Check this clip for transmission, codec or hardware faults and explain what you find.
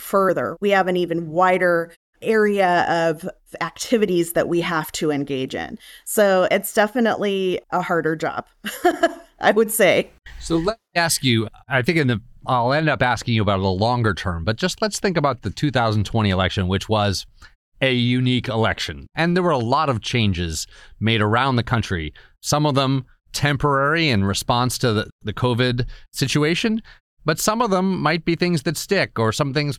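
No transmission, codec or hardware fault can be heard in the speech; the audio stays continuous and intact, and the quiet gaps between phrases drop to silence and the sound returns in time for each following phrase.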